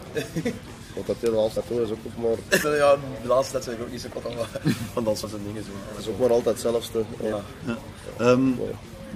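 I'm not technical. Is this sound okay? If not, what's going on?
No. The audio has compressed frames skipped at 1.56, 2.63, 4.21, 5.23 and 7.32 s, each jumping ahead about 0.15 to 0.3 seconds.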